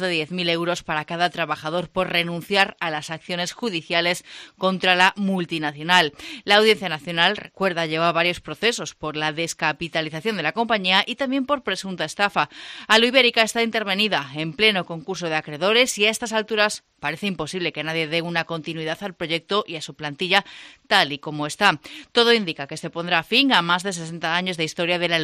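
No technical fault can be heard anywhere in this audio. There is nothing in the sound that needs a time or a cause attached to it.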